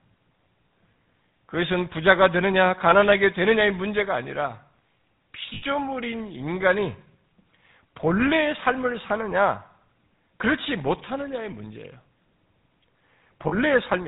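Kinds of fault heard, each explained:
GSM full-rate codec: This is the original GSM phone codec, which models the throat and mouth as a filter and drives it with a coarse train of regularly spaced pulses, keeping only a fraction of the excitation detail. The codec damage is plainly audible across the whole clip. The speech has that buzzy, gravelly grain, with nothing above 4 kHz, and the thin, rasping quality fits the 13 kbps full-rate version.
Lost GSM frames: Here the decoder got bad frames and covered them by reusing the last good frame's settings, so the sound briefly freezes into a rough, metallic ring instead of dropping out. There's a short one around 2.90 to 2.94 s, the longest at 5.54 to 5.63 s (about 80 ms of loss), and another at 13.48 to 13.54 s. None lasts long enough to fade fully to silence.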